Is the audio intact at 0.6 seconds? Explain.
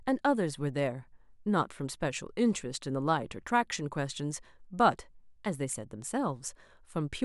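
Yes, the audio is intact at 0.6 seconds, with no fault audible at that moment.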